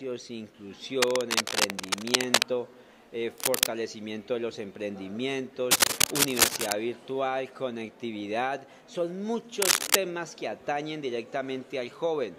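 Four bursts of cable scratch noise break up the sound, at 1.02 to 2.44 s, 3.38 to 3.67 s, 5.71 to 6.74 s and 9.62 to 9.97 s. Each is a dense, ragged rustle sitting a few dB above the sound itself, and the last one is louder still, around 10 dB up. It's likely a worn lead or connector being moved, with its contact resistance jumping around and spraying that crackle into the signal.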